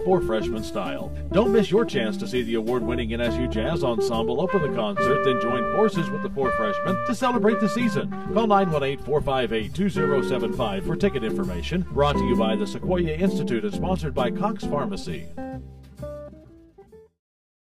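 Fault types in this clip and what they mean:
Channel delay (comb filtering): The sound is hollow and phasey from start to finish, with a fixed tonal colour that never shifts. One channel runs late by around 5 ms, and when the two are summed to mono, the shared content cancels at evenly spaced frequencies. The first notch sits near 100 Hz, with further notches repeating up the spectrum roughly every 200 Hz.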